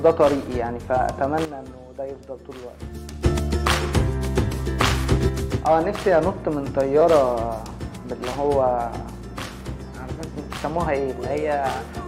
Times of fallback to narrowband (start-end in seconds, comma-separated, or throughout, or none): none